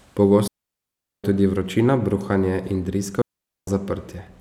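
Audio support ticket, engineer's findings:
Digital wireless dropout, 0.48–1.24 s and 3.22–3.68 s. Clean near-silent holes, 0.76 s then 0.46 s, no noise. First ends before "tudi vročina bruhanje in", second follows it. Receiver muting on lost link data.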